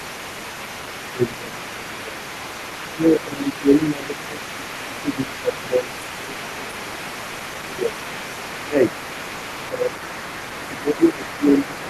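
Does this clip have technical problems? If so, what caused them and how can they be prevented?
Yes. The speech is suppressed in double talk at 0.0–0.51 s, 1.13–2.33 s, 2.94–8.08 s, 8.6–8.78 s, 9.69–9.96 s and from 10.68 s to the end, dipping by roughly 15 dB. The likely cause is an echo canceller that cannot tell the talker from the loudspeaker echo and turns both down. Unlike a network dropout, the level is turned down by the canceller, and it does so only while a second voice is present. Better double-talk detection in the canceller, or a headset, prevents it.

The other side's voice is leaking through for the whole clip, sitting about 15 dB below the talker. It is likely residual loudspeaker sound that the echo canceller failed to remove from the microphone. Unlike room reverberation, which trails the talker's own speech, this is a separate voice with its own timing. It overlaps the suppressed stretches. 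A headset or a better-converged echo canceller would prevent it.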